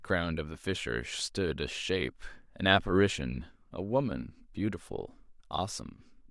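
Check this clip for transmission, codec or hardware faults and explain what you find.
No transmission, codec or hardware faults are audible here.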